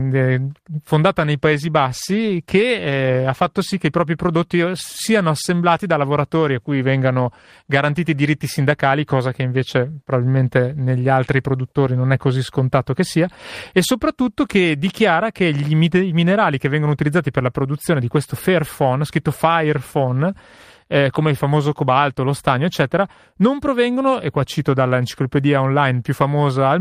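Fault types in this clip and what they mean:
call bitrate drop: From 1.38 to 3.84 s, after "fondata nei" and recovering by "i propri", the speech loses detail and takes on a coarser, rougher texture. The rate sits at its lowest for about 2.4 s of that span. This is the call's encoder being told to spend far fewer bits after the bandwidth estimate fell. The change in quality fits a step down from about 32 to about 17 kbps, with fidelity returning once the rate climbs back.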